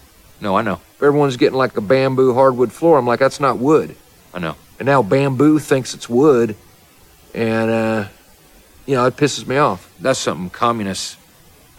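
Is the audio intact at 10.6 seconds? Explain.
Yes, at 10.6 seconds the audio is intact, with no fault present at that moment.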